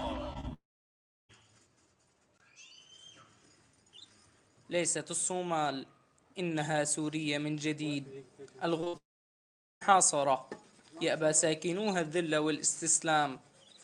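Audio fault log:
0.33 s and 0.41 s, short concealed packet loss: two brief smears right at the start. About 20 ms went missing each time, and the decoder stretched the previous sound across the hole before blending back in, so you hear a little wobble rather than a clean cut.
8.81 to 8.88 s, short concealed packet loss: two back-to-back 20 ms holes patched the same way. This gives a short, slightly warbly smudge that leads straight into the next problem.
8.88 to 8.95 s, burst of packet loss: about 60 ms gone in one run. The receiver kept extending the last sound and turned it down as the gap went on, so there's a held, fading buzz or hiss. Then the audio picks up further along with that slice simply missing.
0.53 to 1.31 s, long network dropout: the sound trails off into a short fading tail, then there's roughly 0.68 s of silence before it returns, with about 0.76 s of material skipped. 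This is likely the network delivering nothing for that stretch, with concealment giving up and falling to silence.
8.97 to 9.90 s, long network dropout: the same behaviour, but longer. A brief decaying tail gives way to about 0.79 s of silence, and the audio comes back roughly 0.84 s further on. Everything in between is lost, all of it heard through the 12 kHz bandwidth of the Opus call path.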